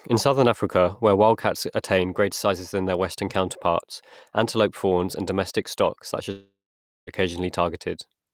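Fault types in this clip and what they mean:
Long network dropout: after "and domestic stock such" the sound smears into a fading buzz, then near-silence until 7.10 s, about 0.76 s lost, likely from a stalled stream.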